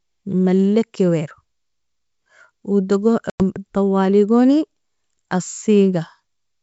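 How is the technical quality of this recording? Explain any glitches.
One glitch stands out: packet loss on an ADPCM call, from 3.30 to 3.43 s, on speech carried by G.722 wideband coding that reaches up to about 7 kHz. Roughly 100 ms of audio drops out, which fits a handful of consecutive lost packets. The gap is filled with silence. The decoder's adaptive predictor and step size then no longer match the sender's, so the speech comes back with brief grit or wrong level before it resynchronises. A spectrogram shows a sharp-edged blank column across all frequencies. The waveform shows a flat gap.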